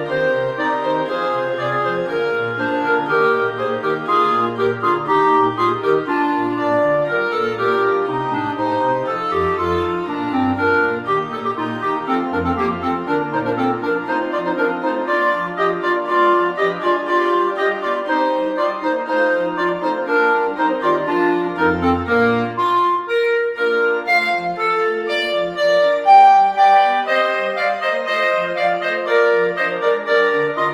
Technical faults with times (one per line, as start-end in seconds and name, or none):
none